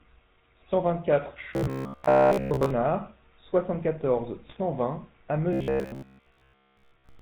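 Speech coded with the GSM full-rate codec throughout, at what sounds like its 13 kbps rate: a steady, gravelly buzz with nothing above 4 kHz, unlike the brief damage elsewhere. From 1.54 to 2.70 s and again from 5.53 s to the end, the voice becomes a rigid metallic drone at about 67 Hz, robotic sound from repeated short buffers. This is likely caused by one 15 ms chunk looping while most of the real audio is skipped, and its fixed pitch sets it apart from the codec's roughness. GSM bit errors cause sudden squawks and gargles at 2.82 to 2.88 s and 4.44 to 4.58 s. These are short bursts that distort 3 and 7 frames respectively, not a sustained buzz.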